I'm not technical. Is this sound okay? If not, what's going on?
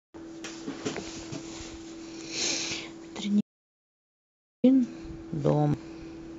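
No. At 0.44 s and again at 5.74 s, the speech jumps forward: a short piece is missing, about a tenth of a second the first time and about a fifth the second. This is compressed frames skipped. Chunks of the stored audio were never played, so the sound leaps ahead with no pause.

From 3.41 s to 4.64 s, about 1.2 seconds, the sound cuts out completely and then returns mid-flow. This is an audio dropout to silence, likely from the input briefly disconnecting. Unlike the skips, this gap is dead silence with not even background hiss, and whatever happened there is lost.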